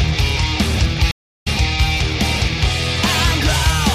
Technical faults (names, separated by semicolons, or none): stream reconnect